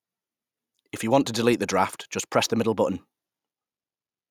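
No technical faults can be heard anywhere in the speech. There is nothing to place on a timeline.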